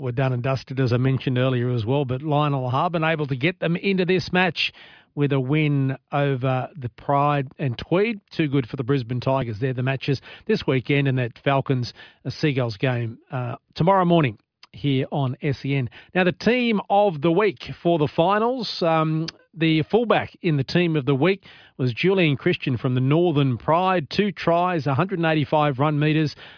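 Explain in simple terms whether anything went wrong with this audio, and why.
Listening to this speech recording, nothing went wrong that I could hear; no moment stood out as a problem.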